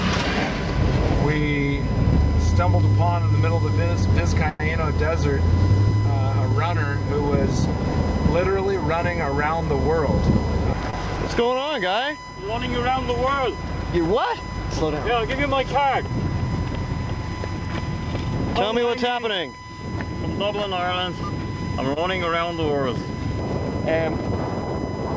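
A steady USB whine at 1 kHz runs under the whole recording, sitting about 15 dB below the programme level. Its fixed pitch at exactly 1 kHz matches the 1 ms frame rate of a USB bus. Current drawn in those frames leaks into the audio through shared power or ground, producing a constant tone rather than anything that tracks the material.

At 4.49 s the sound stops moving forward and is drawn out as a fading buzz or hiss for about 107 ms, ending at 4.63 s, before resuming exactly where it left off. This call audio freeze was likely caused by packets being held up in transit until the jitter buffer ran dry, with the receiver extending the last sound while it waited. Nothing is lost, but the gap adds 107 ms of delay.

Two brief stalls from a late packet follow, at 10.90 s and 21.93 s, each lasting under 60 ms. In each, one packet missed its playout time and the receiver held the preceding sound for 27 ms and 28 ms respectively, then carried on from the same point. 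Nothing is skipped, but the held sound is stretched, with a faint buzz or dip.

Between 18.70 s and 19.44 s a jitter buffer speed-up plays the audio about 10% fast while keeping its pitch. The buffer had accumulated more audio than its target, so the receiver trimmed many short pitch-period-length slices, around 70 ms in total, to reduce the latency. The result is a brief hurried passage. All of this passes through a G.722 call path at 64 kbps, which leaves nothing above 8 kHz.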